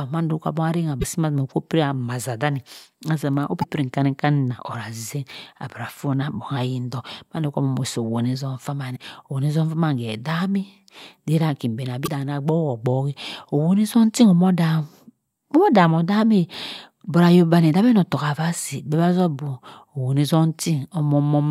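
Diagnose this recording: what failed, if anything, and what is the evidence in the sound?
The failure is at the codec stage: damaged data in a compressed stream. Brief glitches interrupt the speech at 0.98–1.04, 3.59–3.65, 8.92–8.97 and 12.03–12.09 s, each about 50 ms. Corrupted bytes make the decoder misread those frames and lose sync until it finds the next valid header.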